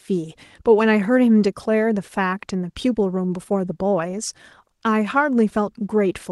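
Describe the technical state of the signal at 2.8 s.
At 2.8 s the speech is intact, carried through the WebRTC call path with its ordinary Opus coding character and band limit around 12 kHz, and nothing breaks or distorts at that moment.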